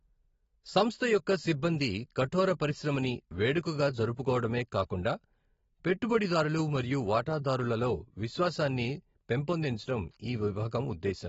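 Speech, with AAC compression damage throughout: nothing sounds above 7.7 kHz, sibilants turn fizzy and sustained vowels warble as sparse frequency lines are dropped frame by frame, which fits a low AAC-LC bitrate near 24 kbps as the likely cause. A plain low-pass would dull the sound without that swirling texture.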